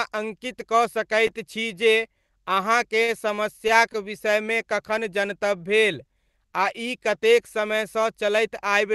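At 3.04 s the speech hits a short stall from a late packet: the jitter buffer ran dry, so the receiver stretched the last sound for about 39 ms until 3.11 s, then resumed without loss, leaving a held, faintly buzzy sound and 39 ms of added delay.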